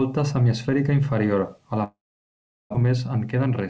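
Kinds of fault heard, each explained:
Long network dropout: From 1.84 s to 2.76 s the speech breaks off. The last sound carries on as a buzz or hiss that fades away. Then there is near silence for about three quarters of a second. When the speech returns, about 600 ms of it is simply missing. The likely cause is a long run of packets that arrived far too late or never arrived. The receiver had to fill the gap itself.
Jitter buffer speed-up: After the gap, the receiver held more audio than it aims for. To cut that delay, it removed many tiny pieces, each one or a few pitch periods long. From 2.84 s to 3.64 s the speech runs at 106% speed. The pitch stays the same, but the speech sounds slightly hurried. Roughly 50 ms is cut in total.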